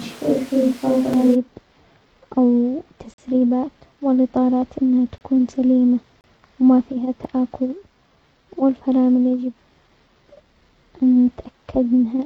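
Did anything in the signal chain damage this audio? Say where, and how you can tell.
Yes. From the start of the clip until about 1.34 s the speech sounds roomy and hollow, thin in the low end, with room noise sitting roughly 25 dB below the speech, though the loudness barely changes. At 1.34 s the sound snaps abruptly to a close, full tone. That is likely a switch to a distant microphone at the capture stage, with the close microphone's feed missing for that opening stretch.

Separately, short hard-edged holes of silence cut into the sound at 1.13 s (about 4 ms), 3.14 to 3.18 s (about 44 ms), 5.18 to 5.21 s (about 27 ms), 6.21 to 6.24 s (about 31 ms) and 7.24 s (about 5 ms). The whole-second spacing fits one-second stream segments. These are gaps between stream segments: mismatched time stamps leave space the player fills with silence, so timing stretches but no sound is lost.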